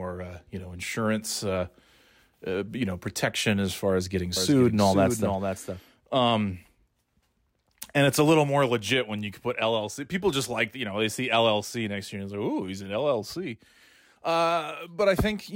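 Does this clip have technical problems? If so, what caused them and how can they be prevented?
Yes. From 4.36 to 5.80 s a doubled audio track appears: a second, full-band copy of the speech trails about half a second behind, a few dB quieter, switching on and off abruptly with no decay, likely from a second capture path or misaligned edit. Prevent it by routing one input only and checking edit overlaps.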